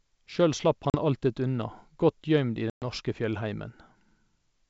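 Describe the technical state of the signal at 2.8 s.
Packets were lost on the ADPCM call from 2.70 to 2.84 s, around seven of them, leaving the G.722 decoder's predictor and step size out of step with the sender's. The sound drops into a hard-edged silent hole, then returns slightly distorted before settling.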